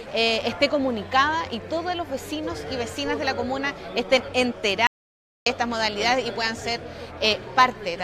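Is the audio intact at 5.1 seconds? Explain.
No. At 5.1 s the clip sits inside an audio dropout to silence running from 4.87 s to 5.46 s, about 0.6 s long. The sound cuts off abruptly and returns mid-flow, with silence between, not even room tone, most likely because the input was briefly lost while silence kept being written. On a waveform this shows as a flat line; on a spectrogram, a blank vertical band with hard edges.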